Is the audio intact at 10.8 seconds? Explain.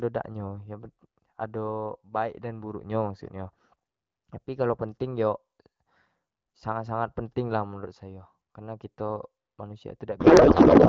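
No, from 10.19 s to the end there's a codec payload misread: octet-aligned AMR frames get decoded as bandwidth-efficient, so the speech turns into garbled warbling noise.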